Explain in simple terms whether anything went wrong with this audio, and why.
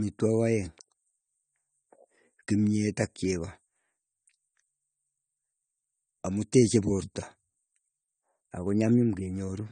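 Yes, something went wrong, and it lasts the whole clip. The speech sounds dull and smeared, and nothing is heard above about 9 kHz, so the crisp top end of consonants is missing and hiss-like sounds take on a fizzy, warbling texture. The likely cause is AAC compression at a low data rate. The encoder discarded high frequencies and coarsely approximated the rest to save space, and that damage is plainly audible.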